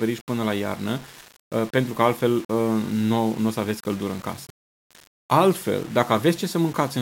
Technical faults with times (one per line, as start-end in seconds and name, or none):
0.00-7.02 low bit depth without dither